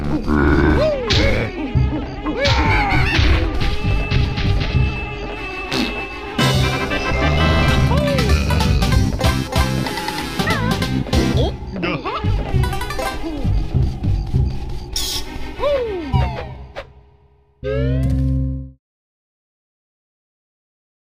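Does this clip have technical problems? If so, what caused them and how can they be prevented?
No, there are no technical problems.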